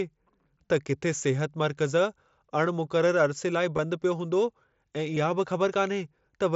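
Concealed Bluetooth headset packet loss occurs at 3.77 s and again at 5.15 s, each gap lasting about 15 ms, which fits two lost headset frames. The receiver filled each hole by repeating a closely matching stretch of the preceding waveform. Both are brief blips, heard through the light graininess of the mSBC wideband link.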